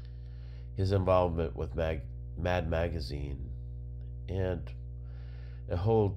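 Mains hum runs through the whole speech clip. A steady 60 Hz tone sits low under the voice, fairly loud. Power line energy is leaking into the signal path.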